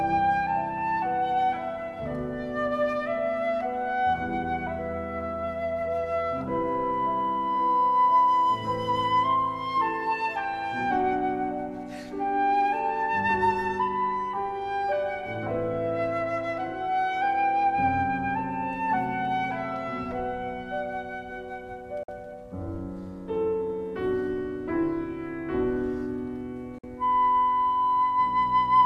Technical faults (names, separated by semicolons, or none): digital broadcast dropout